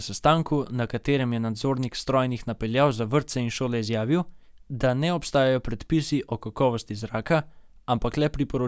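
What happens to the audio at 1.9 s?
Nothing goes wrong at 1.9 s: the speech continues cleanly through that point with no dropout, click, distortion or other fault.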